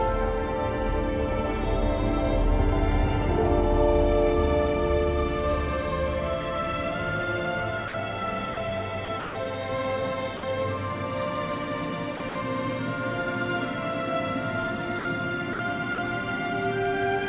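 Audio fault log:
7.88 to 15.98 s, sound dropped by the voice detector: the sound gives way to short patches of steady synthetic noise at 7.88, 8.54, 10.37, 14.99, 15.53 and 15.95 s, each lasting 60 ms except the 30 ms gaps at 8.54 and 15.95 s. The likely cause is a sender-side voice detector judging quiet passages to be background and pausing transmission, with the receiver filling each gap with comfort noise until sending resumed.
9.05 to 12.35 s, sound chopped by the voice detector: two stretches, 9.05 to 9.35 s and 12.17 to 12.35 s, break up into a choppy pattern. Fragments totalling 180 ms in the first and 90 ms in the second are replaced by comfort noise. The detector was likely switching on and off several times within each stretch. The narrowband call codec carries nothing above 4 kHz.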